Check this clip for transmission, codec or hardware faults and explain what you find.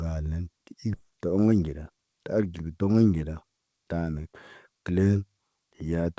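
Two transmission faults stand out, heard over a call path whose content stops at 8 kHz, consistent with G.722 at 64 kbps.

At 0.94 to 0.96 s there is a skip ahead. The speech lurches forward with no silence bridging the join, and about a second of audio is simply gone. The buffer discarded that stretch, likely on overflow, while later audio was already queued, and spliced the two sides together.

From 1.52 to 1.98 s the jitter buffer speed-up makes the speech sound rushed, running at 109% while the pitch stays put. With too much audio banked, the receiver trimmed small pitch-period-sized slices repeatedly, about 50 ms in total, to pull the delay back down.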